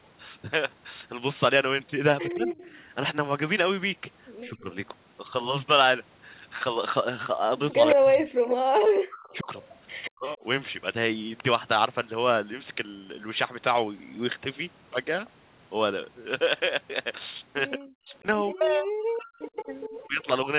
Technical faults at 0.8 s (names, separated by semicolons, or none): none